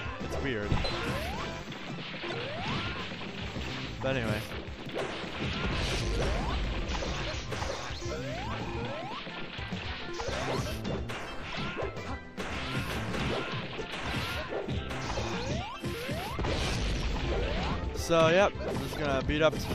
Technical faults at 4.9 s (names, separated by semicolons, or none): chunks out of order